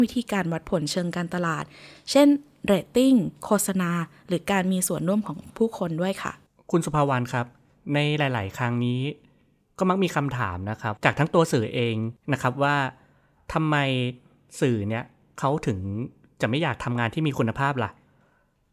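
No technical faults are audible.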